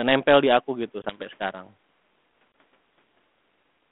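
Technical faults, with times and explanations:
1.02 to 1.20 s and 2.52 to 2.54 s, packet loss on an ADPCM call: each time about one packet, 20 ms of audio, went missing and was filled with silence. The receiving decoder's adaptive predictor and step size then no longer matched the sender's. You hear a hard-edged gap right after "nempel di aku gitu", and the sound comes back with brief distortion until the decoder resynchronises. The second gap is brief. The line carries only about 200 Hz to 3.5 kHz, which fits a 32 kbit/s G.726 link.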